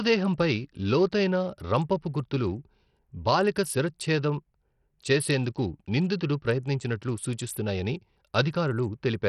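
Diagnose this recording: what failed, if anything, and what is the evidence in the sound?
Throughout, the speech sounds gritty and coarse, with treble that flickers and nothing above about 14.6 kHz. This is likely Bluetooth SBC compression at the codec stage: a starved bit pool, which fits roughly 64 kbps, leaves the upper sub-bands empty and quantises the rest heavily.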